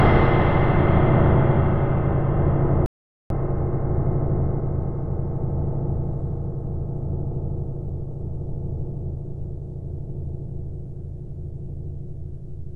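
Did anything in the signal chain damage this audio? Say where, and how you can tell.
Yes. At 2.86 s the sound stops dead and returns abruptly at 3.30 s, leaving about 0.44 s of silence. This is an audio dropout to silence, likely from the input link or device dropping out while the recorder kept writing zeros. What sets it apart from a natural pause or an edit is that no room tone or noise floor remains in the gap. It also shows no smeared fill like network concealment, just a hard cut in and out.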